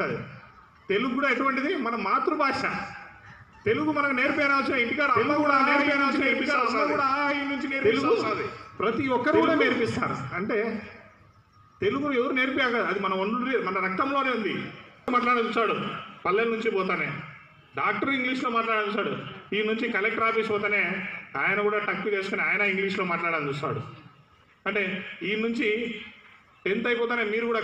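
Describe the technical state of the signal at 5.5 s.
A doubled audio track runs from 4.27 to 9.99 s: a full-band copy trails about a second and a half behind at roughly equal level, likely from a second, slower capture path.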